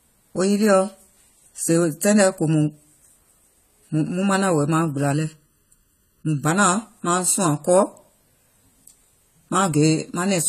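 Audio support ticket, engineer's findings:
Dull, smeared speech throughout, with plainly audible codec damage and nothing above 14 kHz. Likely AAC compression, AAC-LC at a low rate, roughly 32 kbps. The encoder drops the top band and coarsely quantises the rest.

Hollow, phasey colour from 5.13 to 6.45 s. Channel delay (comb filtering). One channel is late by around 0.7 ms and the two are summed to mono, so cancellation notches repeat evenly from about 700 Hz.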